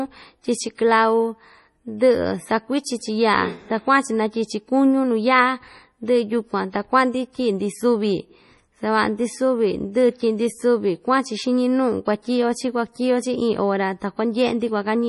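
Throughout the speech there is heavy codec damage, likely from MP3 compression at a low bitrate that fits about 32 kbps. Weak frequency lines drop in and out between frames, giving a watery, swirly texture with metallic chirps on s sounds, and nothing remains above 11.5 kHz.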